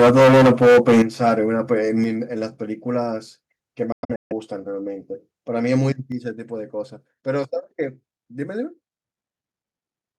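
From the start to 1.31 s the speech has a harsh, crackling edge on its loudest syllables, the signs of microphone overload: peaks run about 14 dB past the converter's limit, so nearly a third of the waveform has its tops flattened. The likely cause is an input gain set too high for the converter.

At 1.02 s the level of both speech and background drops abruptly by about 10 dB, then again at 2.04 s by about 6 dB, and at 6.12 s by about 5 dB. Each is a microphone volume step-down, likely the call software reacting to a too-loud input by cutting the device's input gain in a single jump.

Between 3.92 and 4.32 s the sound breaks into silences, about 0.3 s missing in all, scattered over roughly 0.38 s, with the longest gap near 0.15 s. When the speech returns it has moved on, as if it kept playing during the gaps. This is a Bluetooth dropout, likely from audio packets reaching the headphones too late and being discarded.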